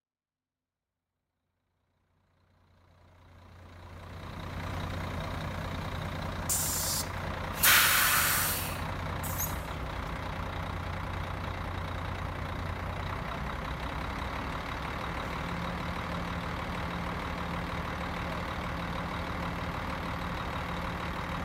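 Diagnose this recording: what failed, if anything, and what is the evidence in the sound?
Nothing failed at any stage; the only level change is a deliberate, smooth fade-in from the very beginning that reaches full level at 4.72 s, with no click or hard edge.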